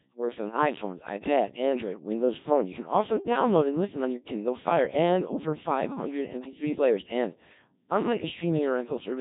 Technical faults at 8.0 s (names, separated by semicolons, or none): Codec 2 vocoder